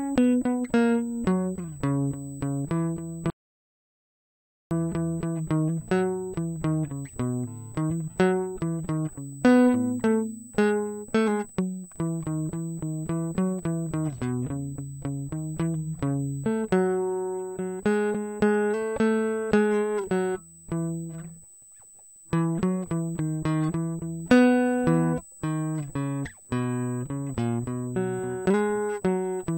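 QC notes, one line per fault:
Throughout: USB whine. A thin, fixed-pitch tone sits at 8 kHz under the music for the whole clip. It runs roughly 25 dB below the music. The pitch matches the 125-microsecond microframe rate of a USB bus. The current drawn in those bursts leaks into the audio through shared power or ground. The result is a steady high whine that does not follow the music.
3.30 to 4.71 s: rebuffering stall. The music stops dead and falls to silence. It picks up again at exactly the point where it broke off. The gap adds about 1.41 s to the running time, and no music is lost. This happens when the player empties its store of downloaded audio. It has to wait for more data before it can continue. The cut is abrupt at both ends. There is no fade and no skip.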